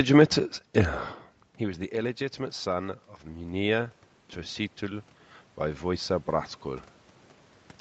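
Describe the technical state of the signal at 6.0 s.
At 6.0 s the signal is in the middle of an automatic gain rising episode that runs from 4.79 to 6.94 s. The input fell by about 16 dB, and the gain control answered by gradually raising its gain, by about 3 dB across the span. Unlike a talker moving closer, which would lift the speech alone, this gain change makes the speech and the room noise swell together, the background rising in step.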